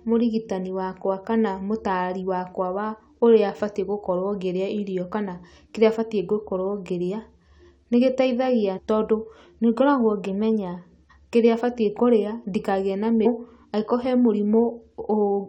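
A speech clip with two brief glitches from damaged data in a compressed stream. Right after "nĩ gĩteithagia" there's a glitch from 8.77 to 8.79 s, and just after "ndikagĩe na" another blip at 13.25 s. Corrupted bytes in the encoded stream made the decoder misread those frames and lose sync. It then skipped ahead to the next valid frame header, so you hear a short disruption in the audio.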